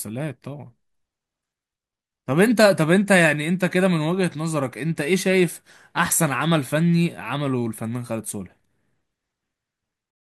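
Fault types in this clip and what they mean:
Nothing in this speech recording stands out as a technical fault, so there's no fault type to list here.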